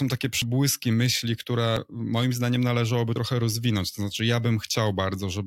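At 0.42 s the speech jumps forward. The same happens at 1.77 s, just before "moim zdaniem należałoby", and again at 3.16 s, right after "moim zdaniem należałoby". Each time about 50 ms of sound is missing, and the two sides are butted together with no gap. This is likely a dropped buffer (overrun): the samples weren't read before the hardware overwrote them. The result is a skip, not silence.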